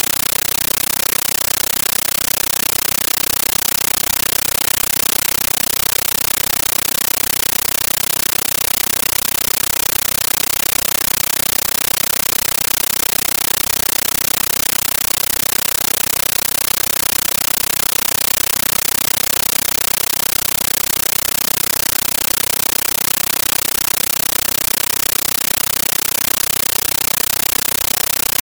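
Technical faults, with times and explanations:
Throughout, compressed stream played as audio: the sound is replaced by very loud, harsh chattering static, consistent with an AC-3 bitstream at 640 kbps reaching the output undecoded. Each data frame plays as a 13.3 ms noise burst followed by silence, repeating 31.25 times a second. The waveform shows dense blocks separated by near-silent gaps. The spectrogram shows broadband noise reaching the top of the band, cut by regular vertical dark stripes.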